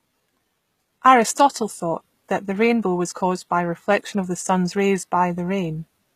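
Speech throughout carrying plainly audible HE-AAC compression, likely at a bitrate near 20 kbps: the treble up to 14.9 kHz sounds bright but synthetic, making s sounds gritty and metallic rather than dull.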